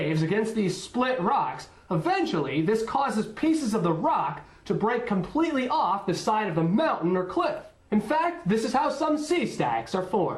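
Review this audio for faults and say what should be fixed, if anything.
Nothing here needs fixing; I heard no faults anywhere in the recording.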